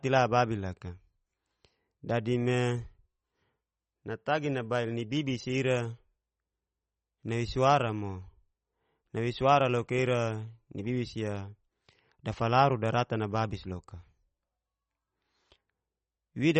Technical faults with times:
0.00-16.60 MP3 compression

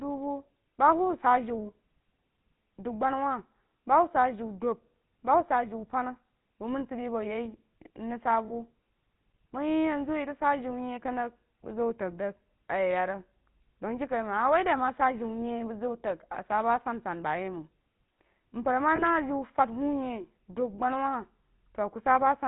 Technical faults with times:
0.00-22.47 GSM full-rate codec
8.48-8.52 lost GSM frames
18.96-19.03 lost GSM frames
21.58-21.60 lost GSM frames

